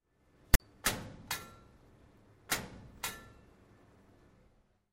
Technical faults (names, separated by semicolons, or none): file tags played as audio